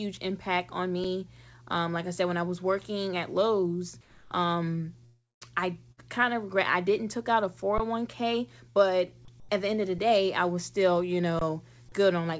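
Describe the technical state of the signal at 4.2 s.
The sender likely stopped transmitting during a detected pause, so from 4.01 to 4.31 s comfort noise replaces the background, giving a steady, featureless hiss about 7 dB quieter.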